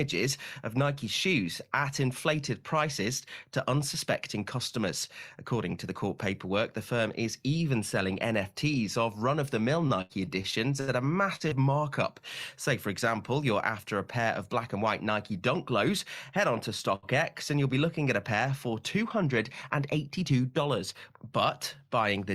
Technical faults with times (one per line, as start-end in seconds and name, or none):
9.87-10.91 repeated packet loss (robotic sound)
11.36-11.54 short concealed packet loss
14.18-14.87 jitter buffer speed-up
16.96-17.06 short stall from a late packet
19.01-20.11 jitter buffer speed-up